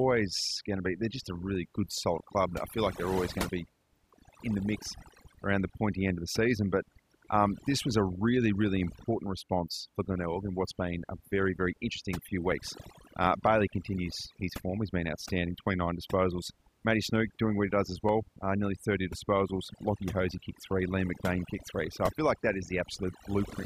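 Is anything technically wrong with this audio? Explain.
Yes. Throughout the speech there is overdone noise removal: frequency bands near the estimated noise level are pushed down hard, leaving near-silent gaps full of twinkling specks. Unlike a noise gate, the suppression is per band, not whole-signal.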